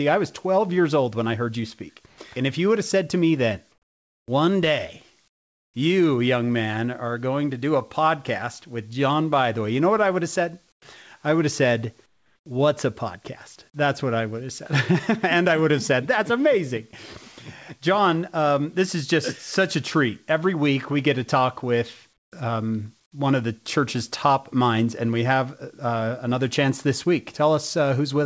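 Speech over a call link with nothing above 8 kHz, and the pauses give it away: at 2.06–2.18, 3.72–4.28, 5.28–5.74, 10.72–10.82, 12.06–12.46 and 22.18–22.32 s, the room tone turns into flat, featureless hiss, dropping by about 4 to 23 dB. That's comfort noise in place of the background, likely from discontinuous transmission: the sender goes quiet between phrases and the receiver pads the gap with synthetic noise until speech resumes.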